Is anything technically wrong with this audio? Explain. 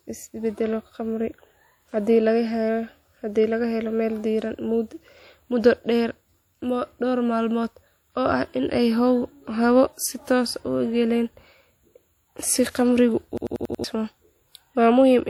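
Yes. A system hang loop occurs from 13.38 to 13.84 s in this speech. The computer or its audio driver stalled while the playback hardware kept replaying the same ring buffer, so one 92.9 ms slice of sound repeats exactly five times, which fits a 4096-sample buffer. At 10.8 repeats per second it comes across as a rapid machine-gun stutter, and roughly half a second of the real audio is lost.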